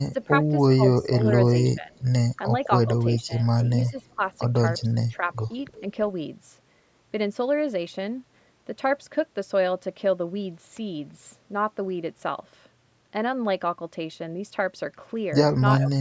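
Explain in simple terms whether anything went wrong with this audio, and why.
The call's echo canceller likely got confused when both people talked at once. Unable to tell this talker's voice apart from the loudspeaker echo, it turned everything down. This is speech suppressed in double talk: the voice dips or partly drops out at 0.01 to 0.15 s, 0.76 to 2.04 s, 3.26 to 4.22 s, 4.99 to 5.83 s, and again in the last moments, from 15.81 s to the end. The longest stretch, around 1 to 2 s, loses the most sound, about half a second in total.

There is also an echo leak, likely when the far side's loudspeaker sound got past that side's echo canceller and was sent back. You can hear it as faint, brief scraps of a delayed copy of the voice, arriving about 0.35 s after the original, at 3.85 to 3.91 s, 4.79 to 4.84 s and 5.72 to 5.80 s. Each scrap is very quiet and lasts under a tenth of a second, so it comes across as a ghostly flicker rather than a clear repeat.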